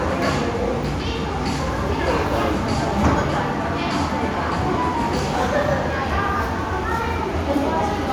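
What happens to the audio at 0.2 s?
Nothing goes wrong at 0.2 s; the audio is intact at that moment.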